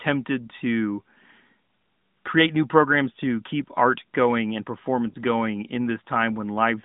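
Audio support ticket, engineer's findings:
Lost AMR speech frames, 5.12 to 5.16 s, between "keep art going and" and "going in". Brief dip or warble. Decoder concealment likely repeated last good pitch and vocal tract settings at lower gain. Gap fits one dropped 20 ms frame. Narrowband AMR path, 150 Hz to 3.7 kHz.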